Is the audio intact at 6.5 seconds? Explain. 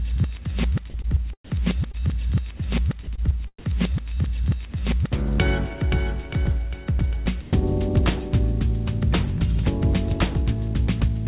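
Yes, the audio is intact at 6.5 s, with no dropout, glitch or other fault at that moment, only the steady narrowband sound of the call path, with nothing above 4 kHz.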